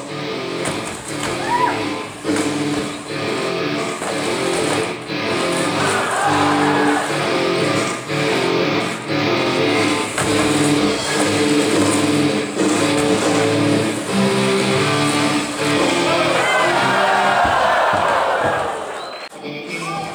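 Sample clock jitter runs right through, with timing wobble of around a couple of microseconds, so a rough hiss sits about 35 dB down, thickening on loud, bright passages.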